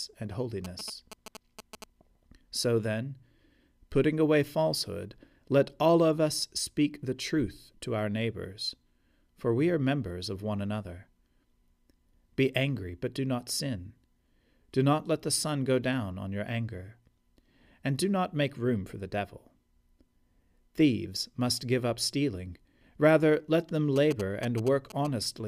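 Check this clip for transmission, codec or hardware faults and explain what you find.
One fault type appears twice in this speech clip. GSM signalling bursts occur at 0.65–1.84 s and 23.96–25.07 s, after "let them": a nearby phone's radio bursts, rectified by the audio circuitry, produce galloping ticks and 217 Hz buzzes somewhat below the speech.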